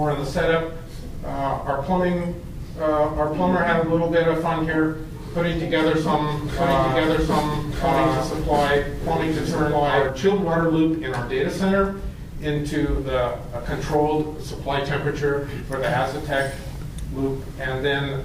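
The audio carries a doubled audio track from 6.39 s to 10.09 s. A second full-band copy runs about one and a half seconds behind the original. It sits at roughly the same level, so the two overlap as equals. The copy has no decay or room colour. It switches in and out abruptly at both edges. The likely cause is a second capture through a slower path, mixed back in with the first.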